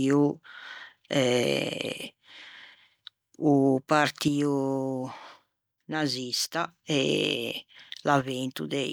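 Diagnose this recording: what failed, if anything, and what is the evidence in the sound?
The speech level drops abruptly by about 6 dB from 4.28 to 6.68 s, then again from 8.22 s to the end, with no ramp in or out. That step is what you get when one channel drops out before a mono sum. Only the shared content remains, at half amplitude. The likely stage is analogue wiring, such as an intermittent cable or connector. A fader move or compressor would ramp and vary in depth, not snap to one fixed 6 dB step.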